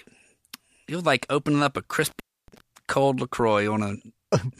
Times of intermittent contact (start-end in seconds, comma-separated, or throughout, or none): 2.06-2.60